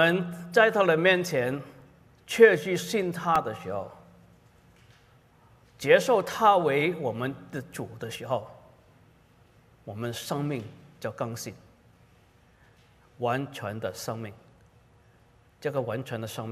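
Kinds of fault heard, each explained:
CD scratch ticks: You get a quick run of four ticks between about 3.12 and 3.47 s, each well under a millisecond. The disc has a scratch or blemish that wipes out more data than error correction can rebuild, so every time it comes round the player patches over or mutes the damaged samples. The ticks land roughly nine per second, which fits one hit per turn of the disc.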